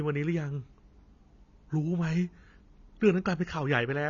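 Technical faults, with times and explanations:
Throughout: AAC compression, likely at a bitrate near 24 kbps; nothing above 7 kHz, and the warbling, smeared sibilants distinguish it from simple low-pass filtering.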